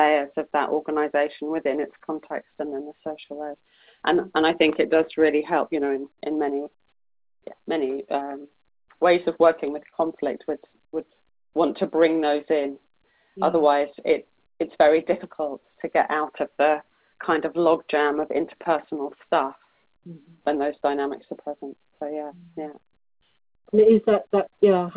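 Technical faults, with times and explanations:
9.90–9.94 s, short stall from a late packet: a packet showed up late and the jitter buffer ran dry, so the receiver held the last bit of sound for about 23 ms, then picked up where it left off. Nothing's lost, just a brief hold.
11.46–12.27 s, jitter buffer slow-down: the buffer was building back its reserve, likely after that stall pushed the delay up by 23 ms, by repeating single pitch periods. About 49 ms gets added, so playback drags to roughly 95% speed at unchanged pitch, over audio already capped at 4 kHz.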